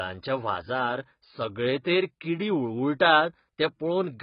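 From start to finish, the speech has most likely been through AAC compression at a very low bitrate, with damage consistent with AAC-LC at around 16 kbps. Short of bits, the encoder has thrown away everything above 5.1 kHz and coded the remaining bands coarsely. The result is a dull, muffled tone with no air or crisp consonant edges. Sibilants come out smeared and fizzy, and sustained sounds take on a warbling, watery texture.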